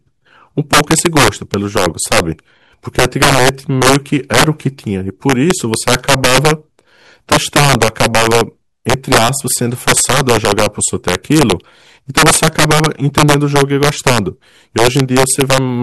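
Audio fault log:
Throughout, integer overflow. The speech is driven about 9 dB past the top of the integer range, and a small share of samples, around one in fifty, land above that limit. Those samples are not held at the ceiling. They wrap around to the opposite extreme. Each loud peak therefore jumps across the full range in an instant. That produces sudden, violent cracks on the strongest syllables, far harsher than ordinary clipping.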